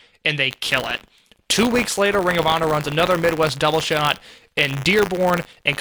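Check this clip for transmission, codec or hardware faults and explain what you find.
One hardware fault is present: buffer tearing, from 0.5 s, just after "and they", to the end. Writer and reader pointers overlap, splicing in a small slice of audio about 40 ms old. The speech carries a steady 100 Hz robotic buzz.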